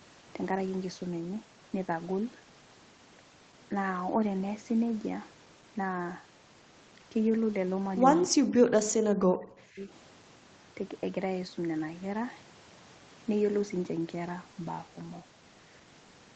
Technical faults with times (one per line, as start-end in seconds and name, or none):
8.26-8.54 speech suppressed in double talk
9.09-9.90 speech suppressed in double talk